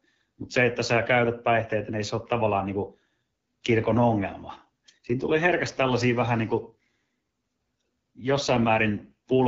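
Throughout the speech, the signal has passed through the AMR wideband (HD Voice) codec at 8.85 kbit/s, one of its lowest rates. At that rate the pulse-driven model of the vocal tract gets too few bits to rebuild the voiced sound accurately below 6.4 kHz, and the band above is filled with shaped noise. The damage is plainly audible from start to finish: the speech comes across rough and raspy, with a grainy, buzzy edge.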